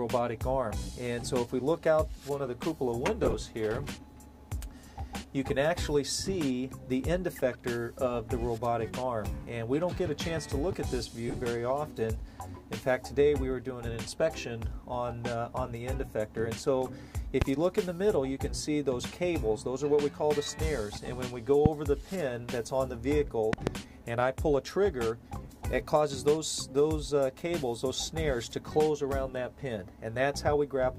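The audio has two bursts of lost LE Audio frames. At 3.23 to 3.34 s, about 45 ms of audio drops out in short gaps spread over 105 ms. At 11.28 to 11.34 s, the same amount is lost over 60 ms, which fits six 7.5 ms frames each time. The decoder fills each gap by repeating the last spectrum with scrambled phase, so tones smear into brief noisy patches. Loud pops follow. Single ones land at 17.42 s and 21.66 s. A quick pair comes at 23.53 to 23.69 s. Each peaks around 20 dB above the sound, which carries on underneath. A voltage step from a switch, static or a driver glitch is the likely cause.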